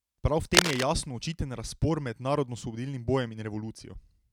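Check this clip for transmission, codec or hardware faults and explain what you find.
One hardware fault is present. From 0.54 to 0.83 s there is cable scratch noise, most likely a worn cable or connector being moved so that its contact resistance jumps rapidly. It sounds like a harsh rustle about 5 dB above the speech, and appears as dense, irregular broadband streaks on a spectrogram and ragged spikes on the waveform.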